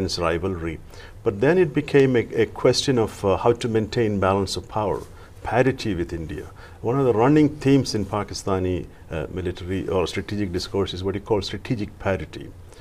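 Nothing stood out as a technical problem on listening to this clip.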